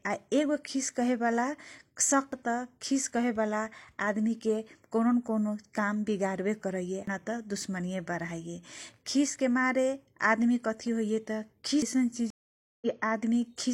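At 2.32 s, 7.07 s and 11.82 s the speech jumps forward abruptly, each time losing roughly a third of a second and joining the two sides with no gap. The second skip lands just before "तँ दुश्मनीये". The regular spacing is the signature of audio missing between chunks. The likely cause is a recorder or processor handling the signal in 5 s chunks and dropping a short stretch at each handover.

From 12.30 s to 12.86 s the audio goes silent for 512 ms, then comes back at a point about 0.7 s later than where it stopped. This is a stream reconnect. The connection dropped, the player stalled, then re-established the link and began decoding afresh mid-stream. What was sent during the outage is simply never heard, so the speech resumes ahead of where it broke off.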